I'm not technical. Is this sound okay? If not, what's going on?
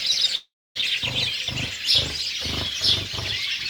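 No. From about 0.35 to 0.77 s there's a long network dropout. The sound stops arriving, so the player stretches the last bit into a fading buzz or hiss that then sinks into roughly a quarter second of silence. When the sound returns, about 0.4 s of it is simply gone. A likely network interruption is to blame. Unlike a brief glitch or click, the hole is long, fades out first, and skips ahead rather than resuming where it stopped.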